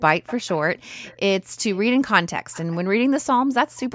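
A faint delayed copy of the speech trails the talker four times: 0.26 to 0.59 s, 1.03 to 1.17 s, 1.73 to 1.78 s and 2.52 to 2.77 s. It arrives about 0.31 s late each time. It's loudest in the first stretch, sitting roughly 15 dB under the speech, and just a quiet scrap elsewhere. That's echo leak, likely from a far end on loudspeaker whose echo canceller let some of its mic pickup slip back down the line.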